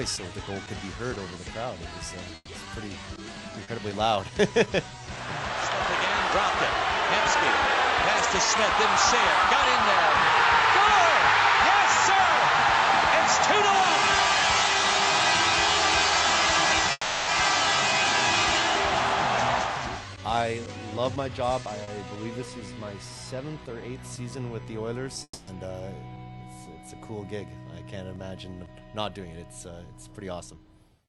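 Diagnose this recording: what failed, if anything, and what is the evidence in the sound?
Network trouble, starting with a burst of packet loss from 2.35 to 2.50 s. The receiver stretches the last sound for about 120 ms, fading it as a held tone or hiss, then drops out for 20 ms. That 120 ms of real audio is simply gone.

Two short concealed packet losses, at 3.63 to 3.70 s and 21.83 to 21.90 s. Each time about 40 ms failed to arrive, and the decoder patched it by extending the previous sound, so you hear a quick smear or wobble before it blends back.

The two longer gaps look like long network dropouts, likely from the link stalling. From 16.91 to 17.30 s the concealment fills 360 ms with a fading buzz or hiss, then 20 ms of silence. From 25.23 to 25.50 s it fills 240 ms, then 50 ms of silence. The audio resumes with those stretches missing.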